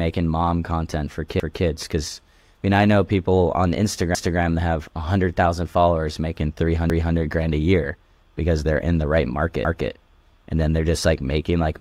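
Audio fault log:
1.40–1.65, 4.15–4.40, 6.90–7.15, 9.65–9.90 s, overlapping chunks: each 2.5 s chunk starts 250 ms before the previous one ends, so 250 ms of speech plays twice at every join, a regular stutter. Waveform and spectrogram show identical 250 ms stretches back to back.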